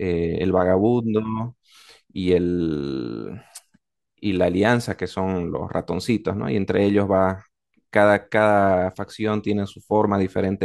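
No technical faults are audible.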